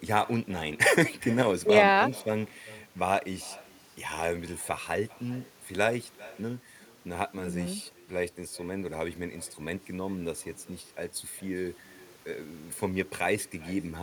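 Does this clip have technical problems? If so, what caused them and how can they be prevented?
Yes. Throughout the speech, every phrase is trailed by a faint, thin copy arriving roughly four tenths of a second later, about 21 dB below the original. This is echo with no canceller: the far end's loudspeaker feeds its own microphone, and nothing removes that pickup before it travels back over the network. Turning on acoustic echo cancellation at the far end, or having that listener use a headset, prevents it.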